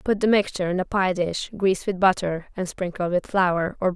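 No dropouts, clicks, distortion, level jumps or timing errors turn up anywhere in the recording; nothing to flag.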